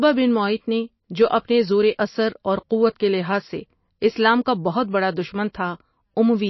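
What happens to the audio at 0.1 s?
At 0.1 s the speech already shows MP3 compression, which runs through the whole clip. Nothing is left above about 5.8 kHz, and weak frequency lines flicker on and off between frames, giving a watery, swirling texture. This fits a low bitrate of around 27 kbps, the likely cause. A plain low-pass filter would dull the treble without that swirl.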